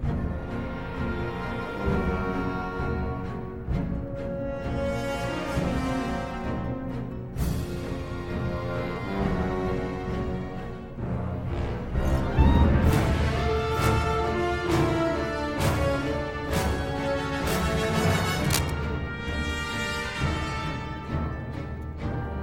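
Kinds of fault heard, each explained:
Cable scratch noise: dense, uneven crackling from 18.44 to 18.70 s, nearly as loud as the sound itself, likely a worn connector or cable shifting.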